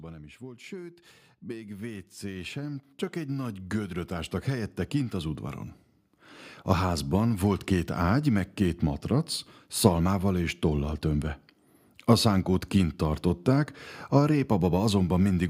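From 0.39 to 5.48 s, just after "nem is", speech and background swell together by about 16 dB: automatic gain rising, as the control lifted its gain for quiet input.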